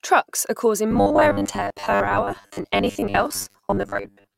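From 0.91 s, right after "are causing", to the very end at 4.37 s, the speech takes on robotic sound from repeated short buffers. It's a rigid metallic buzz at 100 Hz that still tracks the words loosely, with roughly half the audio being repeats. The likely cause is fresh audio arriving too slowly, so the playback loops the last chunk, about 10 ms given that buzz, while real audio gets skipped.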